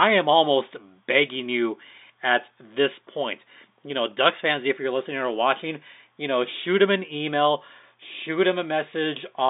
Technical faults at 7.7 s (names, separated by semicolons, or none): none